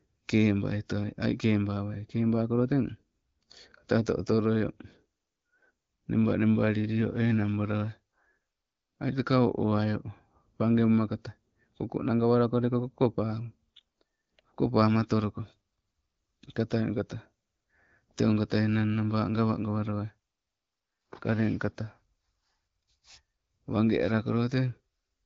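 No faults found in this speech; the band tops out at 7 kHz, consistent with the AMR wideband (HD Voice) codec path, and the light coding texture fits a rate of about 15.85 kbit/s.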